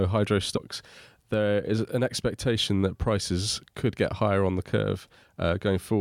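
At 0.56 s there is damaged data in the compressed stream. The decoder misreads the corrupted frame and resynchronises, producing a brief glitch in the speech.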